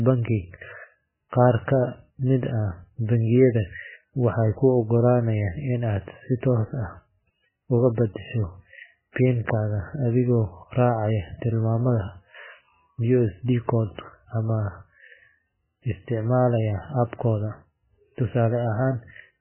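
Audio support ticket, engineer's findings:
Speech throughout: nothing above 3 kHz, watery swirl and smeared sibilants. Likely MP3 compression starved of bits, fitting about 8.6 kbps; the warble distinguishes it from a plain low-pass filter.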